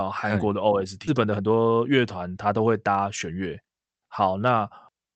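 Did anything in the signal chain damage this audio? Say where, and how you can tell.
Yes. At about 1.07 s the speech lurches forward: the sound on one side of the point butts straight against sound from later, with no silence or fill between them, and roughly a second of material never plays. This is a skip ahead in the network and jitter-buffer stage. A block of audio was dropped while newer packets were already queued, so playback jumped to them and the delay shrank by about a second.

From 1.13 s to 4.35 s the speech runs hurried, about 115% of normal rate, yet the pitch stays where it was. That combination points to a jitter buffer speed-up rather than a resampling or clock fault, which would shift pitch too. The buffer was holding more audio than its target, so the receiver repeatedly cut out short pitch-period-sized pieces, about half a second in total, to pull the delay down. The Opus call path underneath, band-limited at 8 kHz, is not the source of either effect.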